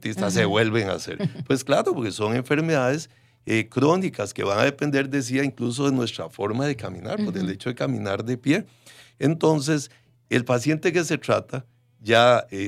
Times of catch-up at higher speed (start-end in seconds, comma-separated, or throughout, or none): none